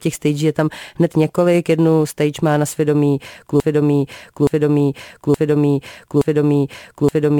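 At 3.60 s the speech locks into a broken-record loop: a 0.87 s fragment repeats four times to the end, likely a stalled player resending its last buffer.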